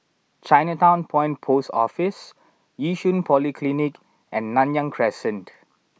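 No dropouts, clicks, distortion or level problems turn up anywhere in the recording.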